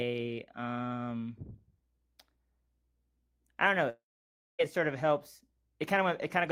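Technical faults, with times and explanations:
3.89–4.61 s, long network dropout: right after "I don't know" the sound smears into a fading buzz, then about 0.58 s of silence, resuming at "it sort of helps" minus roughly 0.7 s of lost audio, likely from packets that never arrived.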